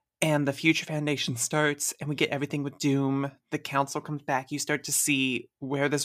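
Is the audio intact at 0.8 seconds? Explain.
Yes, the audio is intact at 0.8 seconds, with nothing at that point that breaks the continuity of the speech.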